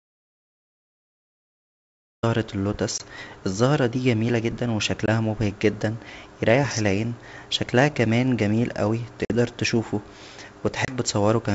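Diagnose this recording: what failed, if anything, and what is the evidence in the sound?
An audio dropout to silence is already under way at 0 s and lasts until 2.23 s. The waveform is flat and the spectrogram blank, with no room tone. The speech enters abruptly. A lost input, likely a disconnected device or link, left the recorder writing silence.

Packet loss on an ADPCM call, in the network and decoder stages, leaves hard-edged holes at 2.98 s (20 ms) just before "الزهرة دى جميله جدا", at 5.06 s (20 ms) between "الزهرة دى جميله جدا" and "مبهج جدا يريح العين", at 9.25 s (50 ms) after "شكلها كان جميل اوى", and at 10.85 s (30 ms). They appear as vertical blank stripes. The G.722 wideband audio reaches about 7 kHz. After each gap the decoder's predictor and step size disagree with the sender's, so the speech resumes with a click, a level error or brief distortion before settling.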